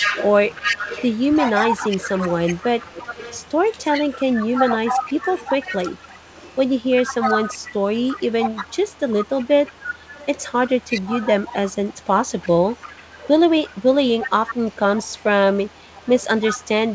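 From 0.0 to 6.56 s an echo leak trails the speech by 0.34 s, only about 5 dB quieter. The far end's canceller likely failed to remove its loudspeaker pickup. A spectrogram shows each syllable's harmonics repeated, shifted right in time. The same echo returns, about 10 dB down, over 6.9–13.29 s, 13.62–15.24 s and 15.55 s to the end.

Inside the first echo stretch, speech suppressed in double talk dips the voice by up to about 10 dB at 1.41–1.6 s and 2.82–2.92 s. This is likely the canceller mistaking overlapping talk for echo. The waveform envelope shows brief notches, and the spectrogram shows those moments thinned, below the band-limited 8 kHz ceiling of the call path.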